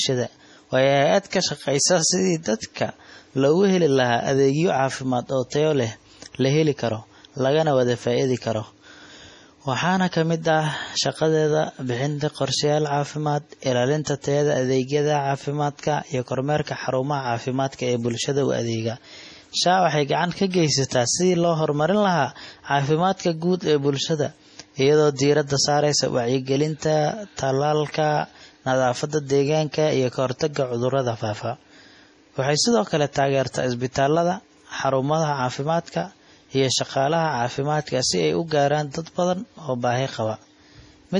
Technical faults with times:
0.00-41.19 MP3 compression
1.30-1.32 pre-echo
25.16-25.19 pre-echo

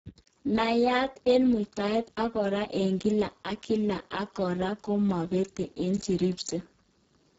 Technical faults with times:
0.00-7.39 Speex codec

